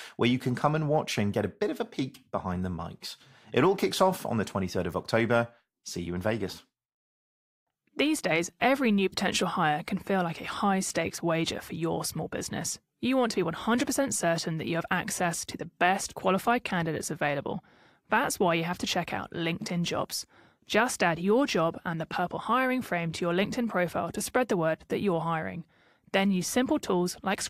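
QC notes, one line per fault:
No faults heard.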